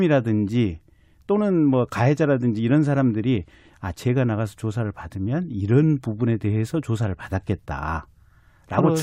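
A speech recording with nothing technically wrong in it. No faults can be heard at any point, so there are no times or causes to give.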